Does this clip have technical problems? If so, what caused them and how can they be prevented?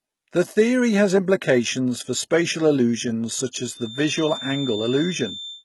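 Yes. Throughout the speech, the treble sounds synthetic. S sounds come out gritty and lispy, and the damage is heavy. The likely cause is HE-AAC compression at a rate near 16 kbps. Only the low band is coded. The treble is copied up from below, so harmonics clash at the crossover. Encode at a higher bitrate to prevent it.

From 3.65 s, right after "for spatial illusions such", a thin whistle at 3.6 kHz sits behind the speech until the end. It sits roughly 15 dB below the speech, swelling and fading slowly. This is likely a feedback whistle. The loudspeaker-to-microphone loop rings just short of howling. Lower the monitor gain or move the microphone away from the loudspeaker.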